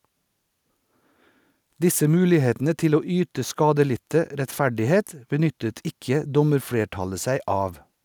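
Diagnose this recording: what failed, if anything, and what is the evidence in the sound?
Nothing in this speech recording points to a failure at any stage of the chain. There is no event in the sound that calls for a diagnosis.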